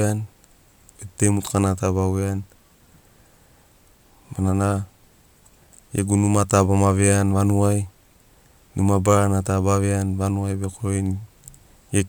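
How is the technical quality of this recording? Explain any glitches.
Nothing here trips any alarms; the recording runs along without a single glitch to point to.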